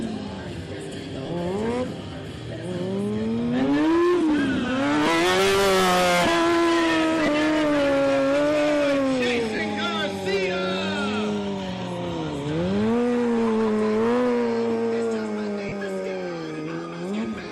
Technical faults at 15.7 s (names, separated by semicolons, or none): lost LE Audio frames